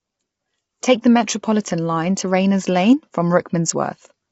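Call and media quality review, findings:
Low-delay AAC compression, throughout: rough, grainy speech, noise between harmonics, nothing above 7.8 kHz. Likely AAC-ELD; its short frames resolve pitch poorly, which fits roughly 24 kbps.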